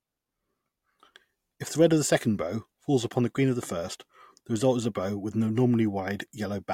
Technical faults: none

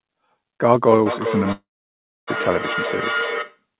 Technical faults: feedback echo between two devices; long network dropout

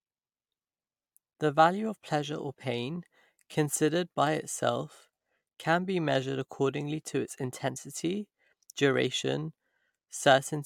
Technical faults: none

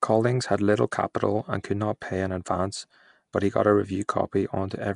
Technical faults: Nellymoser compression

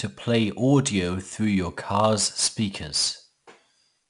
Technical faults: 4-bit ADPCM compression

